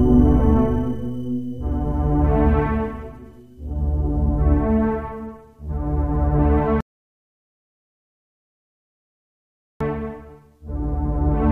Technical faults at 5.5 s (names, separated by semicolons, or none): none